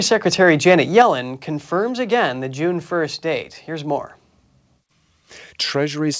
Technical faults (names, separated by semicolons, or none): microphone overload; microphone volume stepped down